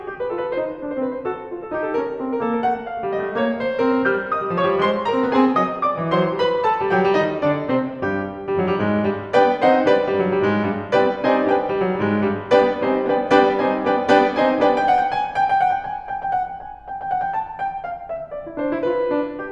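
No technical faults can be heard in this music.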